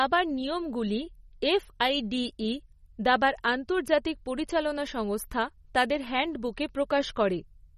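From start to finish the speech carries a watery, swirling texture, with metallic chirps on the s sounds and consonant attacks that smear rather than snap. Nothing is heard above 13.8 kHz, where the treble stops abruptly. The likely cause is MP3 compression at a low bitrate, one that fits roughly 32 kbps. The encoder runs short of bits, so it cuts the top band and drops weaker frequency lines that flicker on and off between frames.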